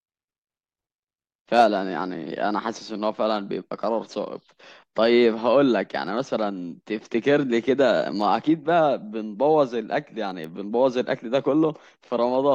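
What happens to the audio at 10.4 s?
At 10.44 s a bit error spike occurs: one flipped bit throws a single sample to about -20 dBFS and back, producing one sharp, broadband tick unrelated to the speech.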